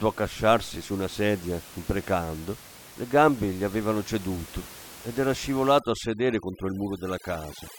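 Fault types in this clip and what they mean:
Overdone noise removal: from 5.79 s to the end at 7.78 s, right after "avevano ceduto ed era", a noise reduction process set far too aggressively pulls individual frequency bands down or out whenever they sit near its noise estimate. The room noise, about 19 dB below the speech, drops and breaks up into twinkling specks. The quieter parts of the voice are stripped away too.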